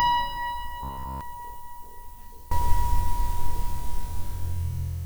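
From the start to 2.51 s the sound drops by about 24 dB, likely one channel inverted, so the shared content cancels when folded to mono. Inside that stretch, from 0.83 to 1.21 s, it turns into a rigid, metallic buzz at about 66.7 Hz, all of it repeated material. That's robotic sound from repeated short buffers, likely from audio arriving late and the last chunk being looped, which fits a buffer of about 15 ms.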